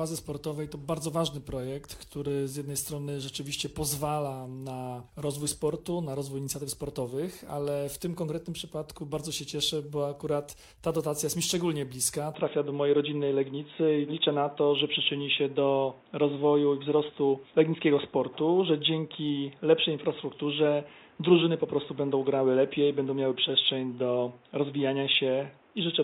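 From 12.34 s to the end, the sound abruptly turns dull and boxy, with nothing above 3.8 kHz, a noticeable shift in level and a faint new background noise, all without any gap at the change. The likely cause is an input switched to a poorer device.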